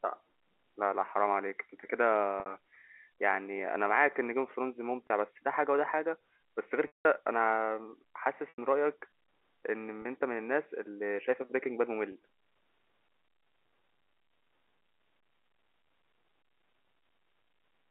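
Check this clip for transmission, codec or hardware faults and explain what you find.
Yes, there is one recurring transmission fault in this speech, which is carried over G.711 A-law telephone coding and heard within a 300 Hz to 3.4 kHz band.

Packet loss with pitch repetition occurs six times: at 2.40 s (60 ms lost), 5.07 s (30 ms), 6.87 s (180 ms), 8.49 s (90 ms), 10.02 s (30 ms) and 12.12 s (30 ms). The receiver filled each gap by repeating the last pitch period and fading it out, so the 30 ms losses sound like a briefly held, buzzy tone. The 180 ms gap at 6.87 s fades toward silence before speech cross-fades back in.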